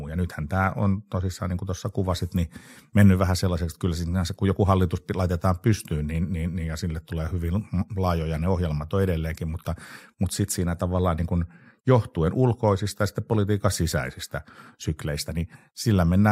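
Speech with a block size mismatch (truncated) running through the whole clip. A steady buzz at about 46.9 Hz sits under the audio, which fits one stage writing 1024-sample blocks at 48 kHz while the next stage reads less of each block and throws the tail away. Each discarded block end leaves a discontinuity, and their regular repetition makes the buzz. Playback speed remains at 1.0x with pitch unchanged.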